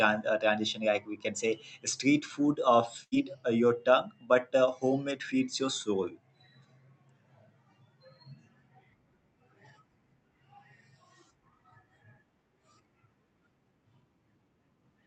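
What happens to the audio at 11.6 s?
Nothing goes wrong at 11.6 s: the speech carries straight through that moment with no dropout, glitch or distortion, only the steady 8 kHz bandwidth limit of the Opus call path that runs throughout.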